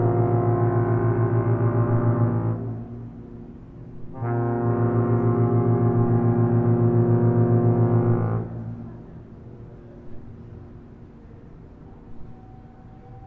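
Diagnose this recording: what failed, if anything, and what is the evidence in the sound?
Listening through the recording of sounds, nothing stood out as a failure at any stage.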